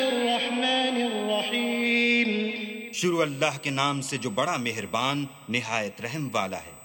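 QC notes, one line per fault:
Throughout, USB whine: a steady, fixed-pitch tone sits at 8 kHz, strongest at that frequency, roughly 20 dB below the programme level, heard as a high whine over the sound. The pitch matches the USB bus's 125-microsecond microframe rate. Current drawn in step with each microframe leaks through the shared power or ground path of the interface and adds to the analogue signal, which is why the tone never drifts.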